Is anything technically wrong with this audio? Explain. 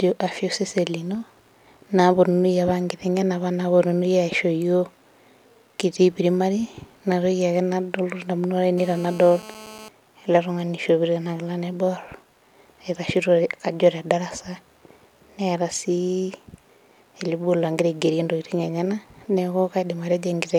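Yes. From 8.78 to 9.89 s, just before "ele tung'ani ishopito", there is GSM phone buzz. A nearby 2G handset on a call transmits in 217 Hz bursts that the audio circuitry rectifies, producing a steady, raspy, harmonic-rich buzz about 19 dB below the speech.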